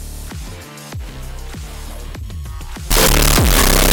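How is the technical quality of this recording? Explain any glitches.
The recording breaks down near the end. From 2.91 s to the close at 3.93 s, a signed and unsigned mix-up likely flips the top bit of 16-bit samples, so every zero crossing jumps full-scale, giving very loud, harsh distortion even in quiet parts.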